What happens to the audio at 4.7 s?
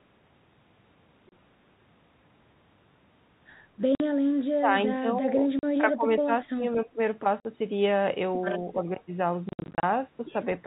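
Between 4.6 and 4.7 s the speech dips sharply, falling by roughly 15 dB for about a tenth of a second. This is speech suppressed in double talk, likely an echo canceller that mistook the talker for loudspeaker echo while both sides spoke, and attenuated everything.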